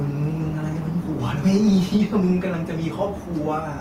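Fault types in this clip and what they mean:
Microphone overload: From 1.47 to 2.24 s the loudest speech peaks are flattened at the converter's ceiling, pushed about 3 dB past it, with about 1.5 percent of samples cut. This gives a harsh, crackling edge, likely from excessive input gain.
Microphone volume stepped down: At 1.97 s, partway through the distorted stretch, speech and background both fall by about 2 dB in a single step. This is likely the call software's automatic gain control reacting to the clipping by reducing the microphone's input level.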